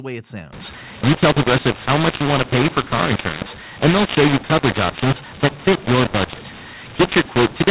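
From 0.53 s to the end at 7.7 s, the speech shows a mu-law and A-law mix-up: mu-law telephone samples are decoded as A-law, scrambling levels so the sound turns harsh and the quietest samples rise to noise. Unlike clipping, which only flattens peaks, the pauses hiss too.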